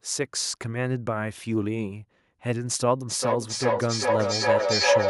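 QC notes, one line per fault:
3.07 to 5.09 s, feedback howl. From 3.07 s a tone around 500 Hz rises out of the speech and keeps climbing until the clip ends. At its peak it stands about 6 dB above the speech. It pulses roughly every 400 ms. That pulse is the trip time of the loop. Sound leaves a loudspeaker, reaches a microphone in the same room and returns louder each time. The loop favours one band, so the repeats narrow to a single howl.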